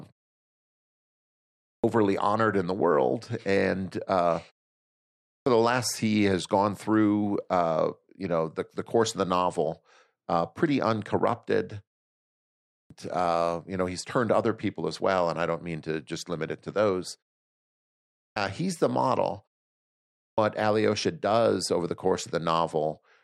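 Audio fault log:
1.26, 4.85, 12.35, 17.74 and 19.76 s, clipped start after a pause: after each silent gap of 0.37 to 1.22 s, the output device has dropped into a low-power or unlocked state and needs roughly 0.55 to 0.62 s to come back. Whatever arrives during that wake-up is lost, so speech bursts in abruptly out of silence with its opening sounds missing, as after "the world and uh", "novel uh pretty uncorrupted" and "he's the model".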